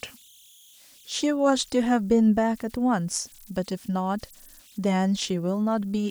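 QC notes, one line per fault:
Throughout: converter idle tones. A faint whistle of around 3 kHz sits in the pauses between phrases, and under the quieter stretches of speech it turns into a grainy, buzzy texture. The error runs about 32 dB below the signal. An undithered delta-sigma converter fed a very small input settles into repeating bit patterns, and those cycles come out as tones. Their pitch follows the small offset at the input, so the whistle's frequency tracks it.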